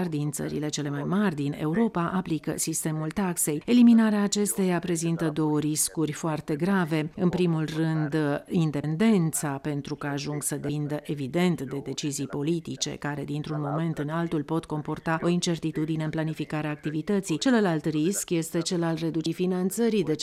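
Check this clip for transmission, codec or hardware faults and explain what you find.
There are compressed frames skipped at 8.83 s, 10.69 s and 19.26 s. The audio jumps ahead each time, by about 100 ms at the first two and about 200 ms at the last. With 26.1 ms frames, that points to about four and seven lost frames. Overlapping neighbour frames smear each join into a short blip, not a sharp click.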